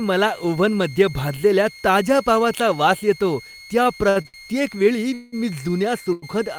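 A thin, high whistle runs under the whole recording, wavering between 2.09 and 2.17 kHz and sitting roughly 20 dB below the speech. This is a switching supply whistle: a power supply running in an audible burst mode, its pitch shifting slightly as the load changes.

From 3.83 to 4.36 s, just after "पावाचा वास येतो त्या", the speech drags and stutters through four brief hitches. The longest is about 70 ms, and together they make up 184 ms, about a third of that stretch. These are repeated stalls (stutter): packets kept arriving late, the jitter buffer ran dry again and again, and the receiver kept extending the last sound to cover each wait. Nothing is lost, but the flow is broken.

Between 5.14 and 5.34 s the sound hangs as a held, fading buzz for about 187 ms without dropping to silence, then resumes exactly where it stopped. This call audio freeze was likely caused by packets held up in transit, leaving the jitter buffer empty so the receiver had to improvise.

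At 6.12 to 6.24 s a single sound is held too long, by about 99 ms, with a slight buzzy dip before the speech carries on. This short stall from a late packet happened because one packet missed its slot and the receiver stretched the previous audio until it arrived.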